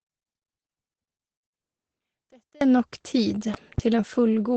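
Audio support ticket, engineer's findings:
Muffled, hoarse, band-limited speech throughout, nothing above 8.6 kHz, heavy codec damage. Opus compression, likely at a low rate near 12 kbps: encoder in its SILK speech mode, wideband only, too few bits for detail.

Speech nearly gone, faint residue, 0.00–2.61 s, about 32 dB down in mono sum. One channel inverted, likely a polarity flip on one leg; shared centre content cancels, leaving only the channel difference.

Two sharp pops, 3.54–3.81 s, peaking a few dB above the speech, which continues underneath. Loud pop pair, likely a voltage step from a plug, switch or driver glitch, shaped by downstream circuitry.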